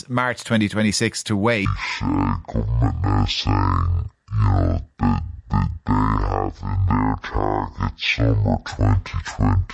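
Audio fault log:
1.65–9.73 s, wrong sample rate: from this point the samples are clocked out at half the rate they were captured at, with no conversion in between, which fits 48 kHz material being played back at 24 kHz. Because speed and pitch are tied to that rate, the speech slows to 0.5 times its normal pace and drops a full octave (12 semitones), so it sounds deep and dragging right through to the end of the clip.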